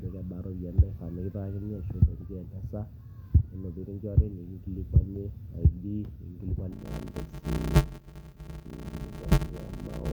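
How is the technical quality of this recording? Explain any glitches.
The recording has one clear glitch. From 6.72 s to the end, the speech takes on a steady buzz near 93.8 Hz and slows to 0.625 times its normal pace, with its timbre unchanged. This is a block size mismatch (padded). Each block appears to carry about 320 samples into a 512-sample read, and the remainder is filled with silence. Those regular gaps make the buzz and stretch the timing.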